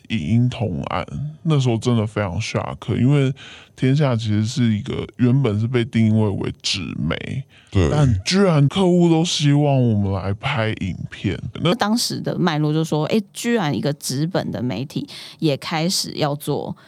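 A speech clip whose opening, from the start to 11.72 s, is a section at the wrong speed: it plays at 0.722 times normal, so the voice is slowed and lowered by roughly five semitones, likely from a clock mismatch. Unlike a pitch shift, timing stretches too, then snaps back.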